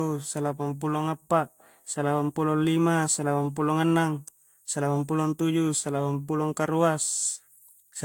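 Throughout the clip the speech shows generation loss, most likely from being decoded and re-encoded about four times with a lossy Vorbis-type codec at a rate that suggests around 71 kbit/s. Each pass re-quantised the signal on a shifted frame grid, so the errors stacked: the speech sounds swirly and hollow, consonant onsets are smeared, and there is no content above 19.4 kHz.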